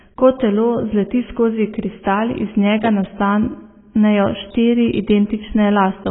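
From start to finish the speech sounds dull and muffled, with nothing above 3.8 kHz, and sibilants and held vowels take on a watery, warbling fizz as the spectrum breaks into gaps. The likely cause is heavy AAC compression, AAC-LC at a very low bitrate, which fits something around 16 kbps. Starved of bits, the encoder lowered its cut-off and quantised the remaining frequency bands so coarsely that parts of them dropped out or smeared from frame to frame.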